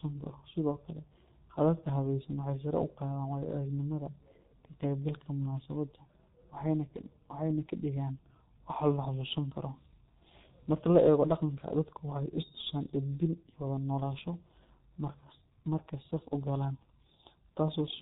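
From start to finish the speech carries heavy G.723.1 codec damage. Coding at roughly 6.3 kbit/s in 30 ms frames, with nothing above 3.8 kHz, leaves the sound muffled and hoarse. Its slowly updated voice model smears consonants together.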